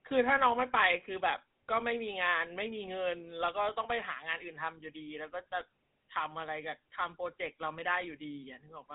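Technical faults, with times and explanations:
Throughout, GSM full-rate codec. The speech has a buzzy, gravelly roughness that is plainly audible. This codec rebuilds the voice from a vocal-tract model driven by a regular pulse train, keeping only a thinned-out excitation, so the fine texture of the voice is lost. The band runs from about 150 Hz to 3.7 kHz, with nothing above 3.8 kHz, giving a dull, telephone-like tone. The sound fits the 13 kbps full-rate coder.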